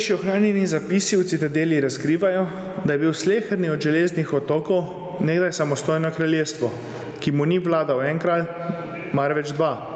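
Right through the speech there's gain pumping: the level gets yanked down by something like 20 dB as each loud syllable hits, so everything sounds squashed and breathing. Likely cause is input gain set way too hot, with a fast limiter clamping it. The call path's top end stops at 8 kHz, which fits a wideband Opus call at modest bitrate.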